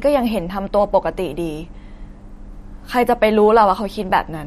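MP3 compression artefacts run throughout the speech, likely from a low-bitrate MP3 encode. Nothing is heard above 14.6 kHz, where the encoder cut the treble. Weak frequency lines switch on and off between frames, giving plainly audible watery swirling and metallic chirps on s sounds, which fits roughly 48 kbps.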